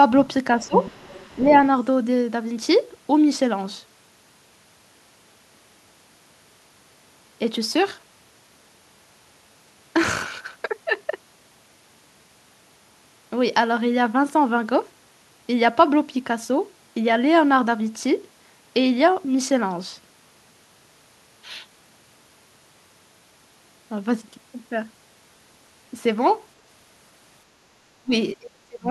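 A speech recording with speech suppressed in double talk at 0.57 to 0.78 s (a dip of roughly 15 dB), briefly at 1.37 to 1.51 s (a slight dip), then at 27.94 to 28.12 s and from 28.39 s to the end (near-dropouts of around 30 dB). The talker's level is turned down, likely because an echo canceller ducked the microphone while both ends spoke. Between 0.62 and 1.36 s the other side's voice leaks through, roughly 10 dB under the talker. It is a separate second voice rather than a reverberant tail of the talker's own sound, which points to loudspeaker echo likely left behind by incomplete echo cancellation.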